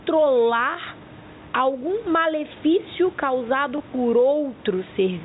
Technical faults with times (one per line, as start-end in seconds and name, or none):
0.00-5.24 gain pumping
3.78-3.80 packet loss with last packet repeated